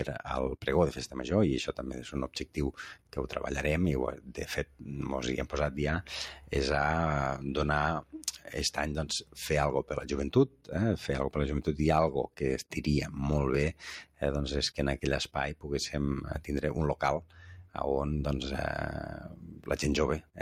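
A noise suppressor built for speech stays active through the whole clip and treats sustained parts of the sound as noise. Its gain swings by around 10 dB, so held tones and decays pump and thin while sharp onsets pass mostly intact.

Within that, the suppressor cuts the sound harder from 0.57 to 10.71 s and again from 12.27 s to the end, dropping it by as much as about 11 dB for around two seconds in each span. Steady and fading passages sink and their tails end early.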